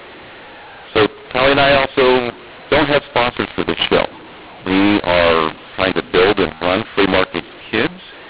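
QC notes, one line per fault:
Throughout: mu-law and A-law mixed up. The speech was coded with A-law G.711 but decoded as mu-law, so each 8-bit code lands on the wrong point of the logarithmic curve. Some sample levels come out too large and others too small, which makes the speech harsh and distorted. The quietest samples are pushed well above silence, so the pauses fill with noise. The telephone band itself is intact and stops at 4 kHz.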